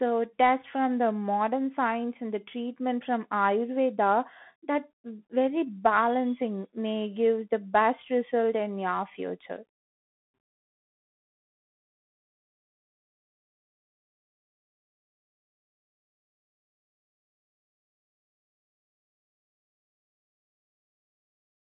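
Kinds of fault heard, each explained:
Bluetooth CVSD headset codec: one-bit slope tracking squeezes the speech into roughly 150 Hz to 3.5 kHz, nothing above 3.8 kHz, with grainy hiss and scratchy sibilants throughout.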